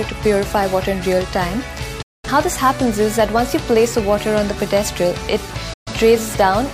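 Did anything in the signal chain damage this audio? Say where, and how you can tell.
Yes: a digital broadcast dropout, at 2.02 to 2.28 s and again at 5.73 to 5.92 s. The receiving and decoding stage lost valid frames and muted. Each gap opens with a fast fade of about 8 ms to silence, and the sound resumes later in the programme rather than where it stopped. The missing spans of about 213 ms and 128 ms fit five and three lost frames. What was broadcast in those holes never reached the output.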